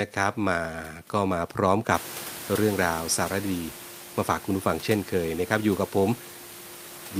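Nothing in the recording points to a technical fault.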